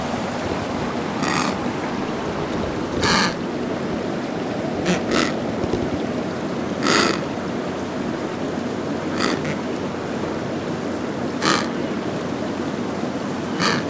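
No technical faults can be heard anywhere in this recording of sounds.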